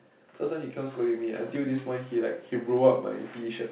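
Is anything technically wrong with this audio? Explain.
Yes. From 0.25 s to 3.05 s there is an automatic gain rising fault: the gain control judged the input too quiet and raised its gain by about 5 dB, so speech and background swell together. Nothing reaches above 4 kHz, consistent with a narrowband G.711 mu-law call path at 64 kbps.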